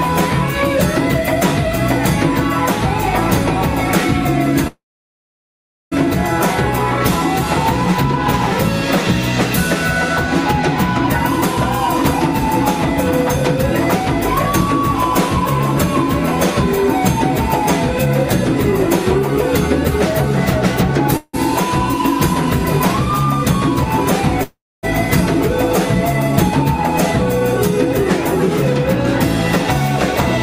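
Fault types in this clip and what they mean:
call audio freeze: the sound stalls three times, for 1.24 s near 4.67 s, then 0.17 s and 0.4 s, likely from late packets draining the jitter buffer. Waveform and spectrogram show a short fading tail, then a near-blank gap, before the sound resumes intact.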